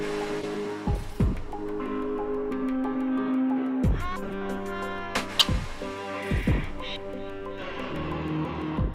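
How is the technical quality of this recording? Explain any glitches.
The recording has four short glitches, all from a corrupt frame decoded: damaged bits in a compressed frame were played anyway, so misread gains and codes put energy at wrong frequencies. They appear at 0.41–0.46 s, at 1.66 s, at 4.23–4.33 s (several consecutive frames), and at 5.37–5.46 s. Each is heard as a brief chirp or noise burst. The last is loudest, peaking near -5 dBFS, and the others sit around -25 to -30 dBFS. Unlike a dropped frame, which leaves a gap or smeared concealment, these add foreign sound.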